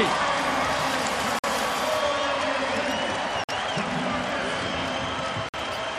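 Audio delivered in 2-second chunks has silence inserted at each join, a gap between chunks. At 1.39–1.44 s, 3.44–3.49 s and 5.49–5.54 s the sound drops out for 50 ms, then resumes with nothing lost, giving a regular stutter.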